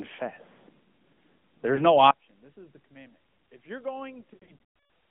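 Throughout, the speech sounds boxy and buzzy, confined to roughly 150 Hz to 3.4 kHz with plainly audible synthetic roughness. That is the AMR narrowband mobile codec, which models the vocal tract from a few pulses per subframe; the texture fits AMR-NB at around 10.2 kbps.

At 1.76 to 1.82 s a brief warbling dip marks a lost AMR speech frame: one 20 ms frame failed, and the decoder bridged it by repeating the previous pitch and tract settings at reduced gain.

From 2.11 s to the end the centred sound collapses by about 26 dB into a faint residue. This is most likely one channel inverted, with the common content cancelling when left and right are summed to mono.

Between 4.34 and 4.87 s further lost AMR speech frames, about 420 ms scattered over 560 ms with runs up to 140 ms, make the sound smear, stretch and fade toward silence before returning weak or rough.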